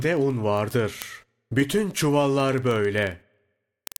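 From 0.13 s to 3.96 s the speech carries word clock ticks: the receiving clock runs roughly 500 ppm off the sender's, so a sample slips about every 40 ms, each tick fitting a single-sample slip. About a hundred sharp, uneven ticks, seen as evenly spaced thin vertical lines on a spectrogram and tiny waveform steps.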